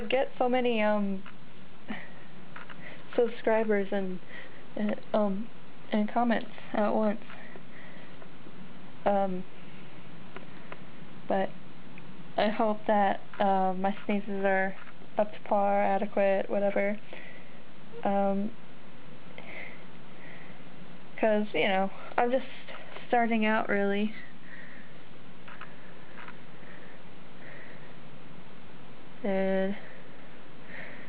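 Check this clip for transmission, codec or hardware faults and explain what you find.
No transmission, codec or hardware faults.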